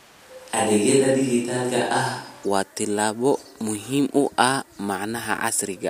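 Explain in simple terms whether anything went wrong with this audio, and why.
Switch to a distant microphone, from the very start until about 2.44 s. For those first seconds the speech sounds roomy and hollow, thinner in the low end, with faint background noise, even though it is roughly as loud as what follows. The likely cause is that the close microphone's signal was missing, so a mic further away was recorded instead. At 2.44 s the sound abruptly turns close and full again, just before "waa tallaabo muhiim u".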